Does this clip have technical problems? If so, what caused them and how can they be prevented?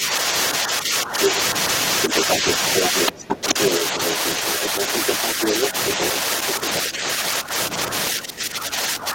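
Yes. There's speech suppressed in double talk from 0 to 1.32 s, 2.07 to 4.81 s, and 5.35 s to the end. The talker dips by up to about 10 dB, likely because the echo canceller couldn't separate them from the far side and turned both down. A headset would prevent that.

The other side's voice is leaking through from 2.02 to 6.14 s at roughly the same level as the talker, with a short scrap about 10 dB down at 6.74 to 6.79 s. This is likely loudspeaker echo that the canceller left in the microphone signal. Using headphones or lowering the speaker volume would prevent it.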